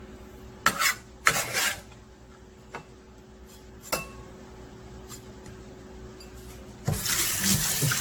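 Generation loss runs throughout. The sound is swirly, hollow and smeared, with blurred attacks and nothing above 18.6 kHz, likely from about ten passes through an AAC-LC encoder near 96 kbit/s.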